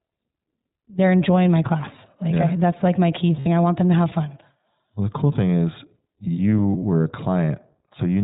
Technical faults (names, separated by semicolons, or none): iLBC codec; lost iLBC frames